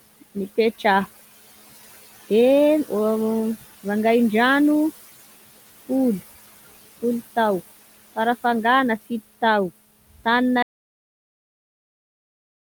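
Noise suppressor artifacts run through the whole of this speech clip: a suppressor is pulling down the bands it judges to be steady noise, frame by frame, by about 14 dB. The room noise, sitting about 18 dB below the speech, is therefore not held at a constant level. It sinks in the pauses and swells back under the talking as the gain decisions shift. An audio dropout to silence starts at 10.63 s and lasts to the end of the clip. The sound stops abruptly into silence, with no room tone underneath. That points to the input being lost while the recorder kept writing silence, most likely from a disconnected device, a broken link or an accidental mute. Whatever was said after that point is gone.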